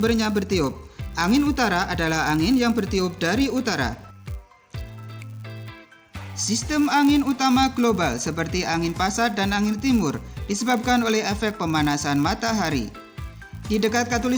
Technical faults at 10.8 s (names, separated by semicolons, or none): filter restarted on every block